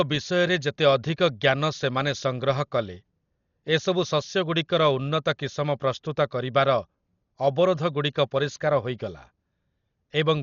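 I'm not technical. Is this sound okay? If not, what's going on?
No. Dolby Digital compression damage runs through the whole clip: the speech sounds dull and muffled, with nothing above 6.9 kHz, and a rough, fluttering hiss around it. This is likely from squeezing the audio too hard, so the decoder fills missing detail with noise.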